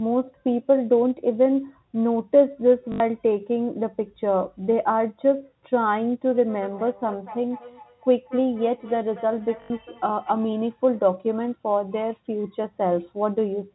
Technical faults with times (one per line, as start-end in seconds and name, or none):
2.92-3.00 packet loss with last packet repeated
6.33-10.40 feedback echo between two devices
9.62-9.70 packet loss with last packet repeated